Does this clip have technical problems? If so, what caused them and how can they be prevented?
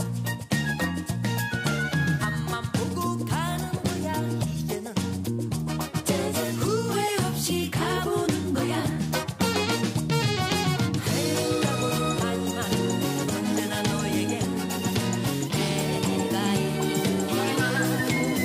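Yes. From 15.47 s to the end, the sound turns about 1.09 times faster and roughly 1.5 semitones higher. This is a wrong sample rate fault, consistent with 44.1 kHz audio played at 48 kHz without conversion. Declaring the true rate or resampling before playback prevents it.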